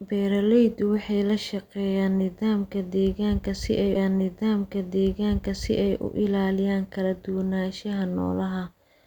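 At 3.95 s, after "nidaamka deegaanka si ay", a stream segment repeated fault adds 2 s: the player fetched or queued that stretch twice, so it replays until 5.95 s, with a small blip at the jump back. The waveform and spectrogram show identical patterns side by side, split by a thin vertical seam.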